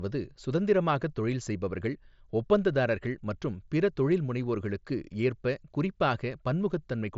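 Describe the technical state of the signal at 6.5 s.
At 6.5 s the signal is intact, with no fault present, the speech passing through the Bluetooth mSBC headset codec path with its band ending near 7.7 kHz.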